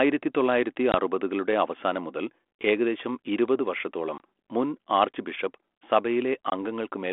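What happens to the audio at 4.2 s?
Between 4.18 and 4.21 s, right after "മുതൽ ഏകദേശം ഇരുപത് വർഷത്തോളം", a 20 ms hole cuts in, roughly one packet lost on the ADPCM call. Unlike a plain dropout, the decoder's predictor and step size fall out of step with the sender's, so "മുൻ ആർച്ച് ബിഷപ്പ്" resumes slightly distorted before settling.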